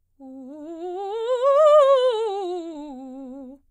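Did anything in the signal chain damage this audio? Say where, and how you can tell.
Yes. At the network stage, a handful of packets arrived late or went missing between 2.57 and 3.43 s, causing scattered short gaps. The receiver patched roughly five holes, none longer than about 15 ms, by extending the preceding music, leaving brief ticks and smears.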